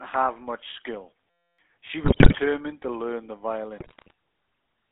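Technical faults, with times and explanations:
Throughout: GSM full-rate codec. The speech has the clear gravelly, buzzy roughness of the old GSM coder, which fits its 13 kbps rate. It models the vocal tract and excites it with regularly spaced pulses, keeping only one excitation sample in three. Much of the fine detail is rebuilt, not carried. The band runs from about 200 Hz to 3.5 kHz, so the sound is thin and boxy. Nothing airy above that survives.
1.30 to 1.59 s: system hang loop. The sound stops and becomes a steady buzz for nearly 0.3 s. The system froze while the audio hardware kept replaying the same ring buffer. The repeated piece is only 5.8 ms long, which fits a 256-sample buffer. It cycles at 172 Hz, about 49 times. That short loop blurs into a pitched hum rather than a stutter. Roughly 300 ms of real audio is lost.
2.04 to 2.40 s and 3.78 to 4.12 s: GSM bit errors. In both stretches the speech breaks up into squawks, pops and gargling. 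This points to corrupted bits reaching the decoder, as on a weak radio link. The first burst is harsher, with about 7 percent of bits wrong. The second has about 3.8 percent. Bad filter, pitch or gain values distort the spectrum or spike the level frame by frame.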